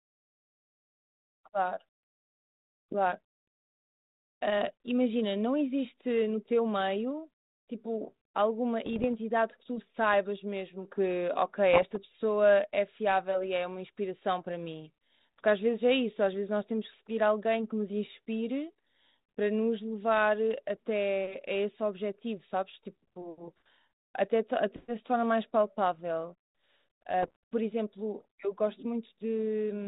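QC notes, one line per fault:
8.85–9.09 s, 11.73–11.97 s and 27.23–27.36 s, bit errors on an ADPCM link: scattered bits, roughly 0.4 to 1 percent, were flipped on a band-limited ADPCM path, which fits 32 kbit/s G.726. Each bad bit corrupts the decoder's adaptive step size and predictor, so the damage keeps ringing for milliseconds after the error itself. The result is clicks and short gritty, rasping bursts with momentary jumps in level. The last burst is the shortest but the densest.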